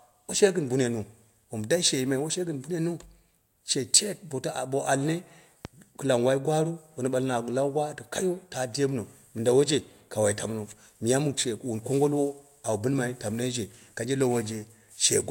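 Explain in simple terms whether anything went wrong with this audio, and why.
A loud pop lands at 5.65 to 5.68 s, a single sharp thump sitting well above the speech, which carries on underneath. It was likely caused by a brief electrical jolt, such as a plug, switch or static discharge, adding a sudden spike to the recording.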